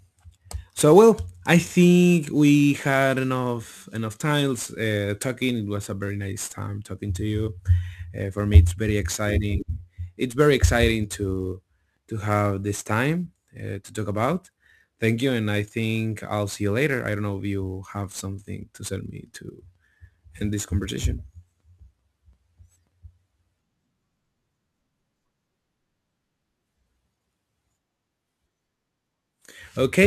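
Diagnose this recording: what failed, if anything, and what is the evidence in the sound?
The converter is the culprit: sample clock jitter runs through the whole speech clip. There's a fine hiss riding on louder, brighter passages that drops out in the pauses. Timing wobble of around 10 microseconds leaves an error only about 25 dB under the signal.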